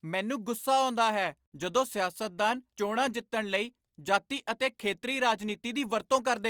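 Speech, with nothing technically wrong to point to at any time in the recording.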